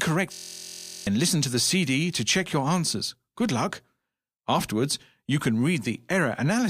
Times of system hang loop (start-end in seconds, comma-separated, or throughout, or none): 0.33-1.07